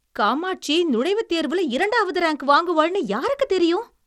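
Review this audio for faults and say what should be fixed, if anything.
The whole clip, from start to finish, carries plainly audible codec damage, and there's nothing above 18.2 kHz. That points to Bluetooth SBC compression as the likely cause, probably at a low bitrate around 96 kbps. SBC splits the signal into a handful of wide bands and hands out bits crudely, so at that rate the top bands get starved and everything else is coarsely quantised, leaving the speech sounding grainy and band-limited. To avoid it, record over a wired connection or a higher-quality link rather than an SBC Bluetooth path.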